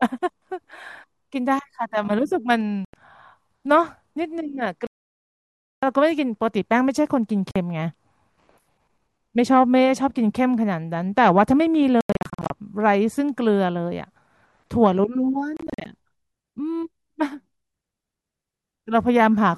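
The speech drops to silence in abrupt gaps: at 2.85 to 2.94 s (about 87 ms), for nearly a second from 4.87 to 5.83 s, and from 7.51 to 7.56 s. Stuttering clusters of short holes follow across 12.01 to 12.50 s and 15.57 to 15.86 s. Each time the sound resumes further on, as though it had kept playing. This is likely Bluetooth dropout: audio packets failed to reach the headphones in time and were discarded.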